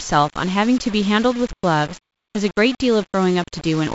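From start to end, the speech carries grainy distortion consistent with low bit depth without dither. The error sits roughly 20 dB below the signal, which likely comes from rounding to about 5 bits with no dither added. Because the rounding error tracks the waveform, it changes with the speech: quiet syllables and word tails turn rough and fizzy, and the softest moments break up into a sputter between steps. The G.722 coding path shows light damage and its top limit near 7.7 kHz.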